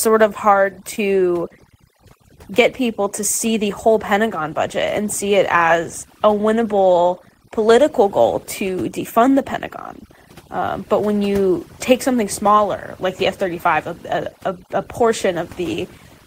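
Throughout the clip the background sits at near silence, broken by twinkling specks, and the speech has its quieter parts hollowed out. This is overdone noise removal. The noise suppressor was set so aggressively that it pushed individual frequency bands down or off whenever they came close to its noise estimate, and the softer components of the speech fell below that line and were cut along with the hiss.

From 0.95 to 0.99 s, just after "of hard", there is a brief smear with a wobble, where the sound seems to hang on for a moment before the real audio returns. This is short concealed packet loss. A stretch of the stream, on the order of 20 ms, which fits a single lost packet, never arrived in time. The receiver filled the gap by extending the preceding sound, then blended back into the speech that followed.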